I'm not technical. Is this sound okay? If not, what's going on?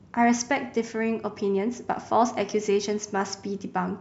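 Yes, this sound is okay, and nothing is going on with it that needs fixing.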